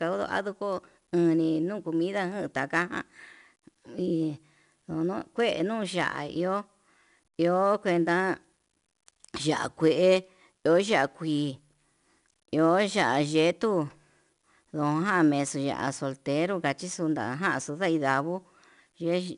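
Throughout the speech, 4-bit ADPCM compression codes each sample as a coarse step from a prediction, with an adapting step size. The error rides with the level as plainly audible hiss on louder passages, and nothing above 10.6 kHz, which fits an 88 kbps stream.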